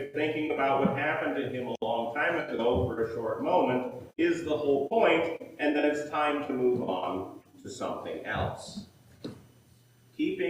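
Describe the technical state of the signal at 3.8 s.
At 3.8 s the signal is intact, with no audible fault at that moment.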